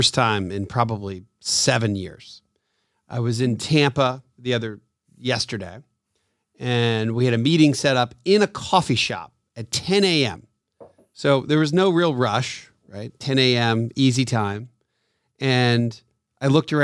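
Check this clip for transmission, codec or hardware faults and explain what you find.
Nothing stood out on listening to this speech recording; no transmission, codec or hardware fault could be heard anywhere in it.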